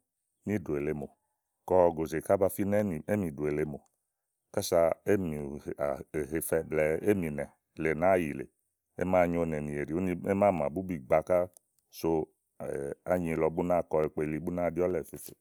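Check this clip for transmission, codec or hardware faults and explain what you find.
One fault is present. Clock drift buffer slips: about twenty regular clicks every 0.87 s from 0.20 to 14.9 s, likely two clocks about 200 ppm apart dropping or repeating a few samples.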